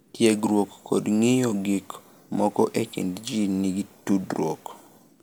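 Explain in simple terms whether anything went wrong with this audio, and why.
Nothing went wrong here, because the speech signal stays steady and intact from beginning to end, with no technical faults anywhere in it.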